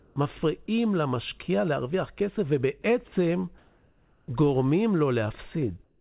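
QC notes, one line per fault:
0.00–0.16 s, 3.58–4.28 s and 5.84 s to the end: comfort noise in place of the background. Detailed room tone turns into steady, featureless hiss about 32 to 37 dB below the loud parts, likely receiver-made during paused transmission. No speech is lost. Level holds, except about 6 dB quieter at the end.
0.66–0.68 s and 2.82–2.84 s: sound dropped by the voice detector. About 10 ms of speech vanishes inside a 20 ms patch of steady noise, likely because the detector briefly took speech for background. Unlike the comfort-noise stretches, real sound goes missing, while the audio stays band-limited at 4 kHz throughout.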